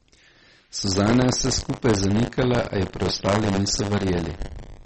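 From start to finish, the speech carries a rattling, robotic buzz at 100 Hz. This is buffer tearing. The writer and reader of the playback buffer have slipped. Roughly a tenth of each 10 ms period replays audio about 40 ms old, with hard joins.

Throughout, the sound is also watery and swirly. Nothing remains above 8.4 kHz. Consonants smear and s sounds chirp. The damage is plainly audible. The likely cause is MP3 compression at a low bitrate, which fits about 32 kbps.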